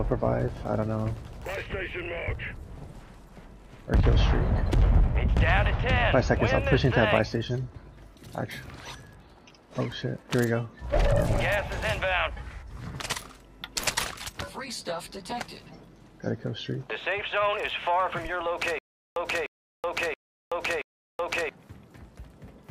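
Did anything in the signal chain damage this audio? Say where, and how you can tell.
Yes, a stutter with silent gaps at 18.79–21.49 s: a 0.3 s fragment replays four times, separated by digital silence, likely from a stalled playback buffer.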